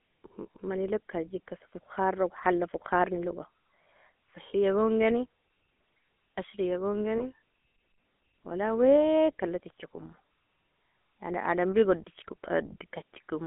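The whole thing has gone through the GSM full-rate codec, and you can hear it right away. That coder rebuilds speech from a vocal-tract model fed by evenly spaced pulses with thinned-out excitation, so the voice comes out buzzy and gravelly, with plainly audible damage. The sound sits in a narrow phone band, roughly 250 Hz to 3.4 kHz, and the grit fits the old 13 kbps rate.

There are two spots with lost GSM frames. At about 0.56 s, one bad frame, roughly 20 ms, was patched by repeating the previous good frame's settings, which leaves a brief rough, metallic ring. The same happens again from 7.18 to 7.24 s, where the held sound rings metallically for a moment before normal decoding picks back up.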